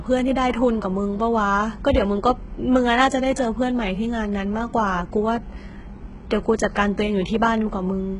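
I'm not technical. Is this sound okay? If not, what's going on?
No. Throughout the speech the hiss-like s sounds are gritty and metallic, which likely comes from HE-AAC compression. Unlike a simple loss of treble, the top is still there, but it is rebuilt from copies of lower sounds, and nothing at all remains above about 11 kHz.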